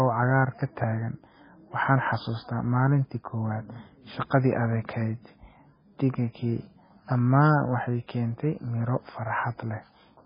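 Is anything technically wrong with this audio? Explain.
Yes. Throughout, the speech sounds watery and swirly, with nothing above 5 kHz. This is likely heavy MP3 compression, pointing to a very low bitrate around 16 kbps.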